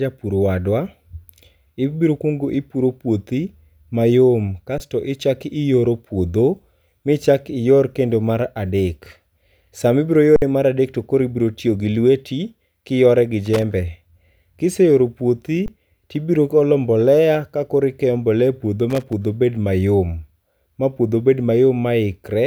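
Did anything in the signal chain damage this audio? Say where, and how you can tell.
Yes. An underrun with held sample occurs at the buffer stage at 4.78–4.80, 10.36–10.42 and 15.66–15.68 s. The waveform flattens, then resumes as missing audio is skipped.

Loose connector crackle in the analogue wiring appears at 13.45–13.63 and 18.90–19.13 s. It sounds like irregular scratching, with a chopped waveform and scattered broadband vertical streaks on the spectrogram.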